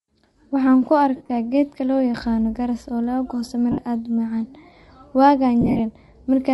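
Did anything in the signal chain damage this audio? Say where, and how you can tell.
Yes. At the codec stage, the speech carries plainly audible transform-coding damage for its whole length: a breathy, grainy texture on voiced sounds where the upper spectrum is partly replaced by shaped noise. This is likely Bluetooth LC3 compression, and the character fits LE Audio's 7.5 ms frames at a moderate rate around 48 kbps. The encoder zeroes upper spectral bands it cannot afford and the decoder fills them with noise.

On the wireless link, there are three bursts of lost LE Audio frames. At 1.16 to 1.29 s, just before "geedka loo yaqano garas", about 97.5 ms of audio is missing, scattered over 135 ms with the longest gap around 50 ms. At 3.72 to 3.78 s, 60 ms is missing. At 5.61 to 5.80 s, 120 ms is missing, spread over 180 ms. Each dropout sounds like a noisy smear rather than a clean gap, because the decoder repeats the last spectrum with randomised signs and fades it as the loss continues.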